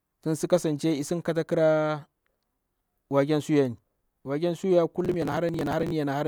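From 5.00 to 5.92 s the processor falls behind and misses buffer deadline after deadline, dozens of them, with each lost block (around 10 ms) simply skipped. The resulting run of hard-edged gaps sounds like processor overload crackle, a gritty tearing across the speech.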